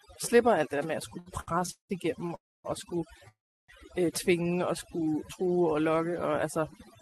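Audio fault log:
Throughout: overdone noise removal. The noise reduction is set far too hard, so individual frequency bands near its noise estimate are pulled down or switched off, taking the quieter parts of the speech with them. The background drops and breaks up into twinkling specks, with soft endings and low-level detail of the speech eaten away along with the noise, through a call path whose Opus-style coding tops out around 12 kHz.
1.09 to 2.31 s: repeated stalls (stutter). Packets kept arriving late, so the jitter buffer ran dry eight times in this span, the longest wait 180 ms. Each time the receiver stretched the last sound to cover the hole, 379 ms in all, about 31% of the span. Nothing is lost, but the speech drags and stutters, with held sounds where playback waited for data before resuming.
2.35 to 2.66 s: call audio freeze. The sound holds briefly as a fading buzz, then drops to silence for about 260 ms before picking up exactly where it stopped, 290 ms of filler in total. 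Likely cause: delayed packets emptying the jitter buffer, with the receiver concealing the wait. No speech is missing, but a pause has been inserted and everything after it now plays 290 ms later.
3.28 to 3.70 s: call audio freeze. Same pattern, longer: a short decaying hold, then roughly 330 ms of silence, 401 ms of inserted filler before the speech continues from the point it halted. Again likely a stall in packet delivery draining the jitter buffer. Nothing is skipped; the gap simply pushes the rest of the clip back by a further 401 ms, so the overall delay keeps growing.
6.26 to 7.00 s: jitter buffer speed-up. With the buffer now holding more audio than its target, the receiver trims short slices of one or a few pitch periods again and again to shed the extra delay, about 50 ms worth over this stretch. Playback runs at about 106% speed with pitch unchanged, so the closing speech sounds slightly rushed and clipped in rhythm rather than higher in tone.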